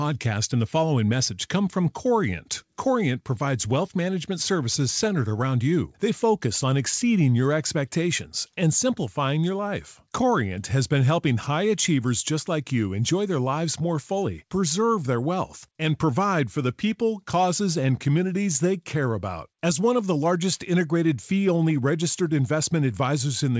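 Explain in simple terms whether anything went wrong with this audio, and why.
Nothing went wrong; the call audio sounds as expected.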